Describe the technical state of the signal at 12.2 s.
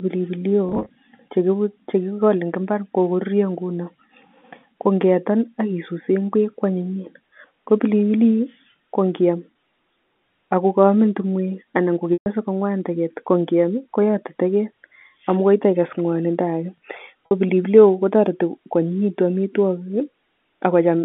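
At 12.2 s the signal is in a packet loss with pitch repetition, spanning 12.14 to 12.26 s, about 130 ms. The receiver fills the gap by looping the last pitch period and fading it out over roughly 50 ms, so a brief held, buzzy tone decays into silence before speech returns through a short cross-fade. Unlike a plain dropout, the gap opens with that sustained buzz rather than an abrupt cut. The telephone-band G.711 line continues beneath it.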